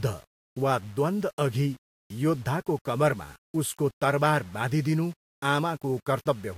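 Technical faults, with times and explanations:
Throughout, low bit depth without dither: grainy distortion rides on the speech and shifts with it, roughly 30 dB below the signal. Quiet stretches turn gritty or sputter. The likely cause is rounding to about 7 bits with no dither, so the error tracks the waveform.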